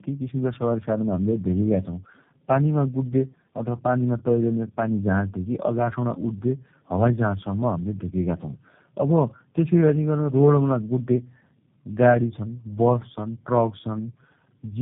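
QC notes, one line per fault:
throughout: tandem speech coding. The audio has passed through three low-rate speech codecs in a row, each decoding and re-encoding the damaged output of the one before, with the final stage sounding like G.729A. The errors compound, so the sound is rougher, more muffled and more warbly than a single codec would leave it. The band is cut hard, with nothing above 3.8 kHz, which adds to the dull, boxy quality.
12.03 to 14.81 s: feedback whistle. A thin, steady tone at 5.4 kHz sits about 15 dB below the sound from 12.03 s to the end of the clip, swelling and fading slowly in level but never building up. The likely cause is a loudspeaker-to-microphone loop held just at the edge of feedback, so one frequency keeps ringing without running away. The tone lies well above the 3.8 kHz band limit of the speech.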